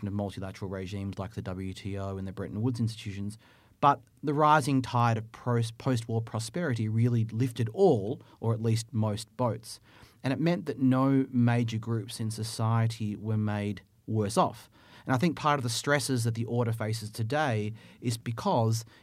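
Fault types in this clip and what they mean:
No fault types are present in this clip.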